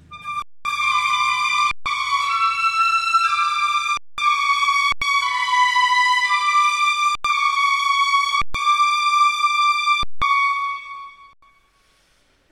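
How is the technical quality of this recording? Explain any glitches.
The sound repeatedly freezes into brief flat silences, eight times: 0.42–0.65 s, 1.71–1.86 s, 3.97–4.18 s, 4.92–5.02 s, 7.15–7.25 s, 8.42–8.55 s, 10.03–10.22 s and 11.33–11.42 s. Each lasts roughly 90 to 230 ms and starts almost silently. These are underruns with a held sample. The output buffer emptied, so the converter kept outputting its last value as a steady level. Roughly 100 to 200 ms of audio went missing during each freeze. Several gaps of about 93 ms and 186 ms fit 4096- and 8192-sample buffer blocks.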